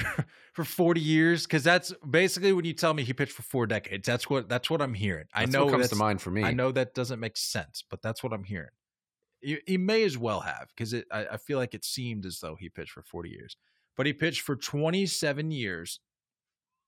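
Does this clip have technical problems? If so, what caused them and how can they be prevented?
No, nothing in this speech recording stood out as a technical problem on listening, so there is nothing to trace to a cause or guard against.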